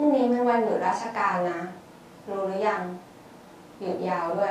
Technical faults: none

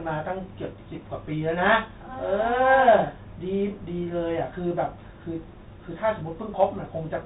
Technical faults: Bluetooth CVSD headset codec

